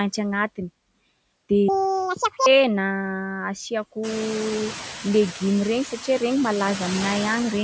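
It's a speech clip with noise suppressor artifacts running the whole way through: the suppressor pulls the steady background down by about 21 dB between phrases, so the noise floor keeps dropping out and swelling back under the voice. From 1.68 to 2.46 s there's a section at the wrong speed: it runs at double speed, so it's rushed and pitched up by roughly ten semitones, likely from that stretch being played against the wrong clock.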